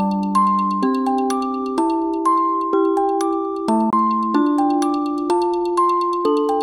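At 3.90 to 3.93 s the music has a CD skip: the laser jumped to another turn of the disc's spiral, so playback goes briefly quiet for roughly 20 ms, then resumes from a different place. Unlike a plain dropout, the music doesn't pick up where it left off.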